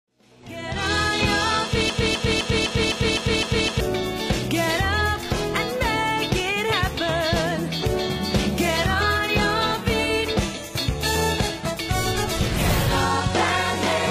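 From 1.90 to 3.80 s there's a broken-record loop: a 0.26 s fragment repeats seven times back to back, likely a stalled player resending its last chunk.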